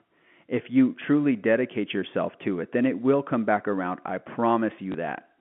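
At 4.92 s, packet loss with last packet repeated covers a 20 ms gap, pointing to one lost packet, by replaying the previous one. It sounds like a small blip. The waveform shows a broken join, and the spectrogram a thin vertical streak below 3.4 kHz.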